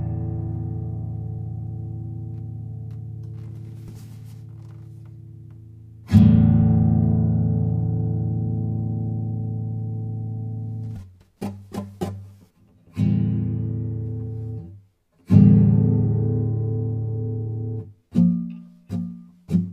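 From 12.03 s to the end, channel delay (comb filtering) sets in. One channel arrives roughly 10 ms late, so summing to mono cancels evenly spaced frequencies from around 40 Hz upward. The hollow, phasey colour stays fixed rather than sweeping like a flanger.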